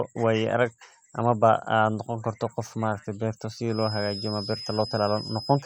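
A speech recording with a feedback whistle in its final two seconds. From 3.66 s to the end, a thin, steady tone sits at 5.1 kHz. It stays well below the speech level and swells and fades slowly in loudness. The likely cause is a loudspeaker-to-microphone loop held right at the edge of feedback. That loop keeps ringing at one high frequency without building into a full howl.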